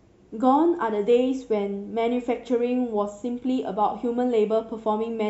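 Nothing to flag in this bit of speech; no technical faults turn up anywhere in it.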